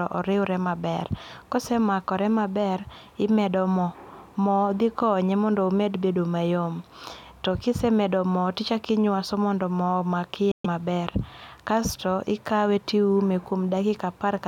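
A Bluetooth dropout hits this speech at 10.51 s and lasts until 10.66 s. The speech cuts to silence, and when it returns it has moved on. Roughly 130 ms of material is simply gone rather than paused, as if it kept playing unheard. This is likely a run of wireless audio packets arriving too late at the headphones, so they were discarded and the output went silent until good packets came in again.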